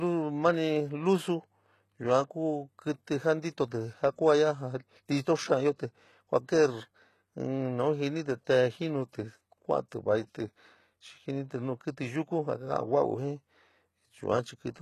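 Throughout, the speech carries plainly audible HE-AAC compression, likely from a low-bitrate encode near 16 kbps. Copied treble makes s sounds metallic and gritty rather than merely dull, and nothing is heard above 12.3 kHz.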